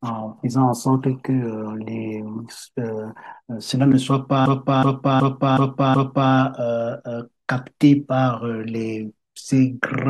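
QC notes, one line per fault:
4.46–6.32 s, system hang loop: the same 0.37 s stretch of speech repeats exactly five times at about 2.7 per second, a stuttering judder. The system stalled while the audio hardware kept replaying its ring buffer, a length that fits a 16384-sample buffer.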